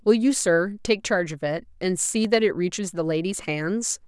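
At 2.25 s the stream likely skipped a fraction of a millisecond of data. These dropped samples make the speech waveform leap abruptly to a later value. Too little is lost to remove any sound; the jump is heard as one sharp click, a thin vertical line across the spectrum.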